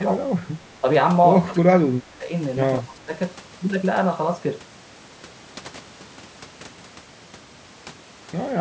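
Speech that dips in level at a few points, which sounds like speech suppressed in double talk, likely from an echo canceller ducking the talker while the far end was also speaking. It's heaviest from 1.46 to 2.31 s and 2.80 to 3.12 s, dropping about 20 dB, with shorter, shallower dips at 0.00 to 0.10 s and 0.59 to 0.63 s.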